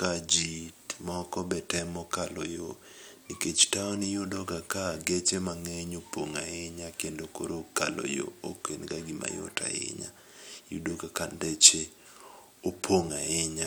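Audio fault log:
No fault was heard in this speech clip.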